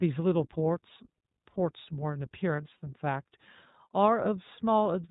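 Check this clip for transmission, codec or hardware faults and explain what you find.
Two faults are present: iLBC codec coloration across the whole recording and one short dropout concealed by the decoder.

The iLBC codec damage is plainly audible from start to finish. Each frame's excitation is coded on its own, and the band stops at 4 kHz, so the speech sounds dull, slightly rough and synthetic, which fits iLBC's 15.2 kbps mode with 20 ms frames.

Lost iLBC frames occur from 2.56 to 2.59 s, a gap that fits a single missing 20 ms frame. The decoder fills it by repeating the last pitch cycle mixed with noise, giving a brief buzzy, held-vowel sound before normal decoding resumes almost immediately.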